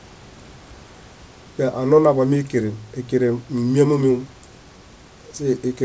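Nothing stood out on listening to this speech, which arrives over a call line carrying nothing above 8 kHz, with faint room noise about 30 dB below it.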